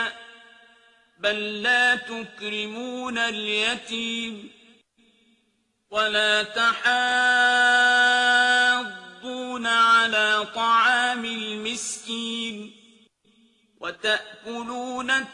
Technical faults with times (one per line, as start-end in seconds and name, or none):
none